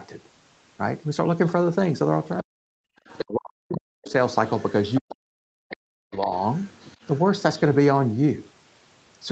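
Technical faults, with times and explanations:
2.38–2.43, 3.08–3.25, 4.11–4.5, 4.94–5.15, 5.71–5.77 and 6.22–7.19 s, other side's voice leaking through: a second voice, roughly 10 to 35 dB under the talker, likely loudspeaker echo the canceller failed to remove.
2.42–4.13 and 5.0–6.33 s, speech suppressed in double talk: the talker's level dips by up to about 40 dB, likely the canceller turning down both voices while both sides overlapped.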